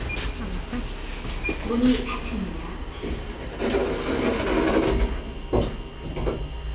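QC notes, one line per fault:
No faults are heard in these everyday sounds. They arrive over a WebRTC call path using G.711 A-law at 64 kbps, so nothing in the audio reaches above 4 kHz.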